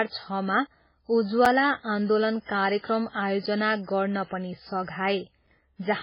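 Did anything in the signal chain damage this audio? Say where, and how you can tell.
Yes. Codec stage: the audio sounds watery and swirly throughout, with nothing above 5.3 kHz. That is likely heavy MP3 compression at a very low bitrate.

Playback or storage stage: there are hard-edged holes of 6.5 ms at 1.45, 3.46 (just before "गर्न पनि") and 5.47 s. They repeat every 2.0 s. These are gaps between chunks, where silence sits at each chunk join.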